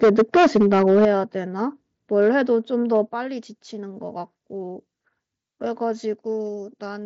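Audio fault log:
0.03 to 1.08 s, 2.19 to 2.29 s and 2.95 to 2.97 s, microphone overload: the loudest syllables carry a harsh, crackly edge. It is worst in the opening stretch, where peaks run about 10 dB past the converter's limit and a good share of the waveform is flattened. The later two are brief, at about 1 dB and about 0 dB over. This is likely an input set too hot, so the converter slices the tops off the peaks.
0.04 s, 1.05 s and 3.09 s, microphone volume stepped down: the whole sound, background included, drops abruptly in level, by about 2 dB, then about 7 dB, then about 6 dB. The larger two steps land right after the distorted stretches. This likely comes from automatic gain control in the call software, which reacts to clipping by cutting the device's input volume in a single step.
3.29 to 7.05 s, pre-emphasis left on: from here on the sound turns thin, bright and hissy, with sibilance pushed forward. 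The treble rise follows an FM-style 75 µs curve and reaches about 14 dB at 10 kHz relative to 1 kHz. The boost meant for recording or transmission was never undone by the matching de-emphasis, and the mSBC headset codec adds its light graininess on loud sounds.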